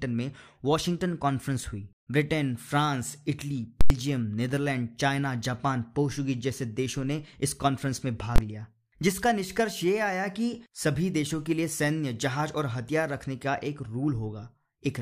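Speech with invalid numbers at full scale: at 3.81 to 3.90 s a 93 ms block (likely a 4096-sample buffer) pins flat, giving a loud pop, dead air, then another pop, and at 8.36 s a shorter 23 ms block (fitting 1024 samples) gives a single bang.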